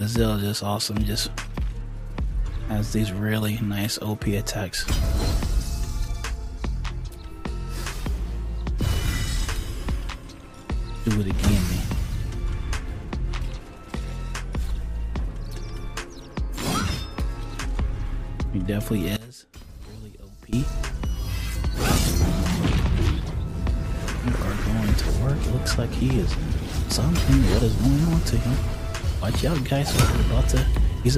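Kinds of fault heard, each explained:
One channel inverted: from 19.17 to 20.53 s the sound falls by about 19 dB and goes faint, likely because one stereo channel has reversed polarity, so shared content cancels in mono. The waveform shrinks abruptly there, and the spectrogram darkens.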